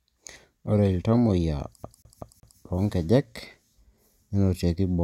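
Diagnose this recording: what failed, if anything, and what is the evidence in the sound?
Playback failed with a CD stuck on one turn. From 1.83 to 2.59 s, one 0.19 s slice of speech repeats four times, muted at each jump.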